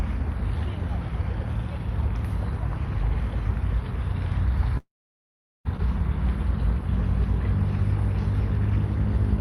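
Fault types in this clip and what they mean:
long network dropout: From 4.77 s to 5.67 s the sound turns into a short fading continuation of what came just before, then about 0.77 s of silence, and resumes with roughly 880 ms missing. The likely cause is network data that never arrived.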